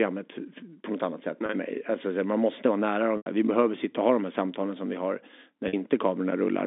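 Speech carried over a telephone line suffers packet loss with pitch repetition: the receiver fills each gap by repeating the last pitch period, which sounds like a brief held buzz at 1.46 s after "på något annat sätt" (30 ms), 3.17 s after "man måste vara nära" (90 ms, fading toward silence before a short cross-fade back) and 5.68 s after "samtalen som vi har" (50 ms).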